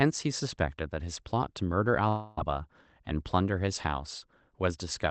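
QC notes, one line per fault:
2.08–2.38 s, long network dropout: packets likely stopped arriving for about 0.29 s. The receiver filled the whole gap by stretching the last sound into a fading buzz or hiss, never reaching silence. The sound then resumes past the lost stretch, with that part missing.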